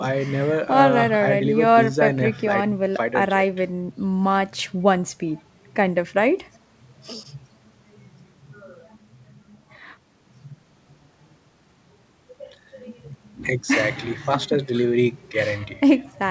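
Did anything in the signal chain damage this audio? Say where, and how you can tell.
No, nothing in the chain has hurt this one; the speech has simply come through a WebRTC call path, and the way the top end stops at about 8 kHz fits a wideband G.722 codec doing its ordinary job.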